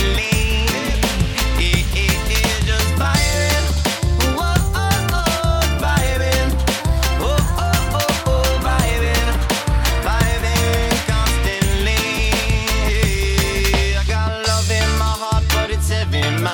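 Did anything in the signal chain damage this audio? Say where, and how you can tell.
No, nothing along the chain seems to have harmed this one, and there's no stage I'd point a finger at.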